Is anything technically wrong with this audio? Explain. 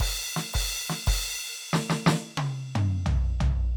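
No, no technical faults here.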